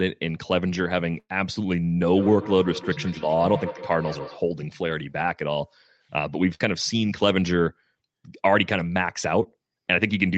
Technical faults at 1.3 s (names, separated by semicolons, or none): burst of packet loss